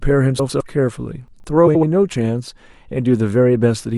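A garbled flutter runs from 0.39 to 0.61 s, and again from 1.67 to 1.84 s. Both are frames out of order. Two neighbouring runs of frames were decoded in swapped order, so each stretch of speech plays with its halves exchanged. The first uses runs of four frames, about 104.5 ms each. The second uses runs of three, about 78.4 ms each. Both fit frames of roughly 26 ms, and no time is lost.

Between 1.28 and 1.44 s, the speech briefly jumbles. This comes from chunks out of order. A 40 ms chunk landed three chunks late, so it plays after the 120 ms of audio that should follow it. Nothing is missing, but the sequence is scrambled, with three abrupt joins.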